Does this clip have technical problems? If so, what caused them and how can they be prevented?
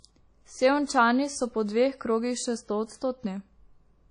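Yes. The whole clip has a dull, washy quality with a hiss that swells and fades with the speech. Nothing is present above about 10.1 kHz. Quiet detail sounds ringing or smeared, as if weak parts of the spectrum were dropped. This is likely WMA compression at a low bitrate, around 32 kbps. The transform codec spreads quantisation noise across long blocks and zeroes faint components. To prevent it, record or export at a higher bitrate or in a lossless format.

There is also pre-echo from 0.86 to 0.89 s, just before "so po dveh krogih". A short hiss, about 27 ms long, leads into the sharp onset, and the attack itself sounds softened. The onset fell late in a codec block. Noise sized for the loud onset was spread across the whole block, including the quiet gap before it. To prevent it, use an encoder that switches to short blocks on transients, or a higher bitrate.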